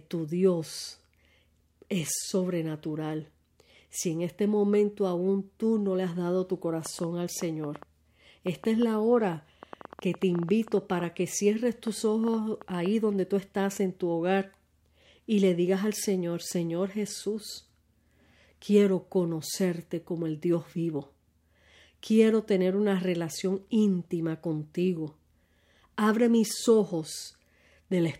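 From 6.86 to 12.87 s, a train of clicks, about 5.5 per second, irregularly spaced, about 30 pulses peaking near 5 dB above the speech, likely from interference or a faulty connection or power supply.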